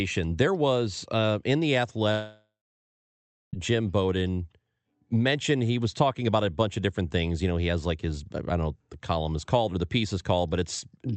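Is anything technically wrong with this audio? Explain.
Yes. From 2.11 to 3.55 s there is a long network dropout, likely caused by audio arriving late or not at all. The receiver stretches the last sound into a fading buzz, then leaves about a second of silence, and the speech resumes with roughly 1.4 s gone. Unlike a brief packet-loss click, or a pause where speech picks up where it stopped, the missing stretch never returns.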